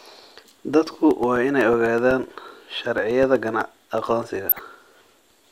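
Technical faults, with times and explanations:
0.11–5.36 s: periodic USB or driver dropouts. Something blocks the USB bus or audio driver every 0.125 s, and roughly a millisecond of audio is lost each time and replaced with silence. Around forty evenly spaced ticks result, eight per second, audible only where speech is present.
4.49–4.59 s: DAB burbling. Weak reception lets a small share of bit errors slip past error correction into the MP2 data. Corrupted samples put short blips of noise in single sub-bands and corrupted scale factors make sub-bands leap in level, which fits a handful of damaged frames and gives a brief burble over the speech.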